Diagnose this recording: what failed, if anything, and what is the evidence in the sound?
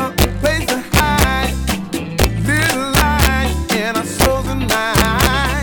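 Integer overflow runs through the whole recording. Whenever the loudest peaks arrive, the sound breaks into harsh, violent cracks, far sharper than ordinary clipping. The fault sits at a fixed-point gain or sample-format conversion stage. The signal was driven about 4 dB past the integer limit, and instead of being clamped, each over-range peak wrapped around to the opposite extreme of the scale. Under one percent of samples cross that limit, so the cracks are brief and confined to peaks.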